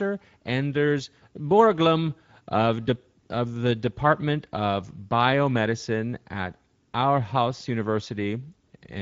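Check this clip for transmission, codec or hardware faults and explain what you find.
One codec fault runs through the whole clip. Speex codec: this CELP coder's sparse excitation makes the speech plainly hoarse and noisy. Nothing sounds above 7.7 kHz, fitting a wideband setting near 17 kbps.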